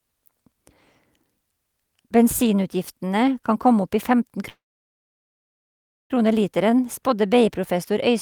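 A call audio freeze runs from 4.49 to 6.12 s: the speech stalls, a brief fading tail gives way to about 1.5 s of silence, then resumes exactly where it stopped with nothing lost. Delayed packets likely drained the jitter buffer, inserting a 1.6 s gap.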